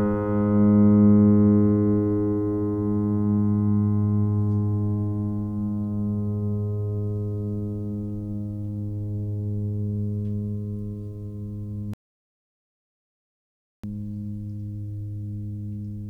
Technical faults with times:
11.94-13.84 audio dropout to silence

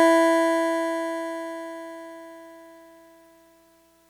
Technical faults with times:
none

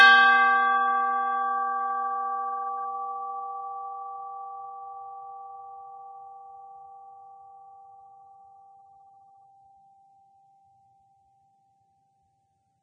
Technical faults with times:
0.00-12.82 Vorbis compression

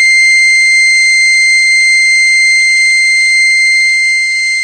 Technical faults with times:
0.00-4.63 AAC compression

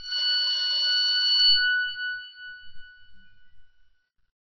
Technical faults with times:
0.00-4.54 MP3 compression

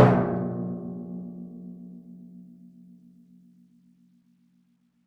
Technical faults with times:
none

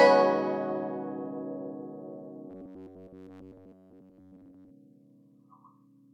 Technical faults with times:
2.50-4.71 robotic sound from repeated short buffers

